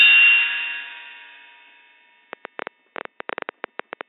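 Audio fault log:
2.33–4.02 s, train of clicks: a run of roughly twenty sharp, similarly shaped pulses ticks over the audio at an average of about 10.7 per second, with uneven spacing between them. Each click rises around 10 dB above the surrounding sound, so the ticking stands out clearly, including in any quieter moments. The repeated near-identical shape points to an outside source, likely electrical interference from nearby equipment or a faulty connection or power supply injecting pulses into the signal.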